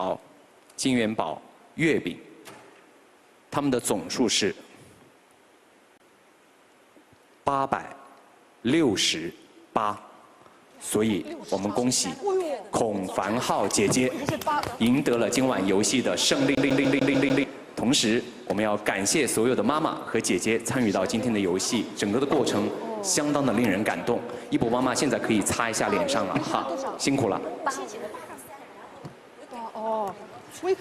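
CD stuck on one turn, from 16.55 to 17.44 s: the pickup is thrown back one track at the same point on each revolution, so a 148 ms fragment repeats six times, each pass cut off by a brief mute, giving a rapid, even stutter.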